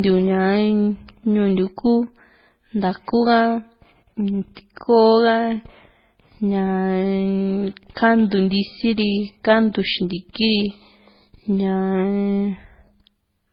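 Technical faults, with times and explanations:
Throughout: transcoding between lossy codecs, likely from an MP3-to-AAC-to-Opus chain; stacked artefacts from each stage are audible, with nothing above 19.9 kHz.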